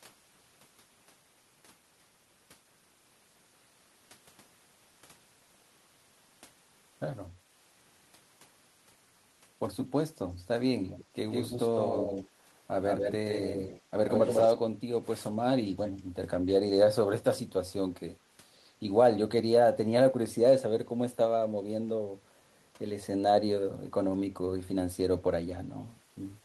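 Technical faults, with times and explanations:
10.88–11.04 s, 11.31–12.29 s, 12.87–13.82 s and 14.08–14.54 s, echo leak: a copy of the speech returns 151 ms late, faint at first, about 25 dB below the talker, then close to full strength, about 5 dB down, and finally as loud as the speech itself. This is likely a far-end loudspeaker whose echo canceller failed to subtract what its microphone picked up, so the residue was sent back as a delayed, doubled voice.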